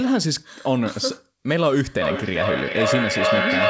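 Speech, and from 2.01 s to the end there's feedback echo between two devices: a second device in the room is replaying this mic's audio, the mic picks it up again, and neither echo canceller catches it. Each word returns roughly every 0.4 s, thinner and ringier each time, and the repeats stack up instead of fading, peaking about 3 dB above the speech. The top end stops at 8 kHz, which fits a G.722 call codec.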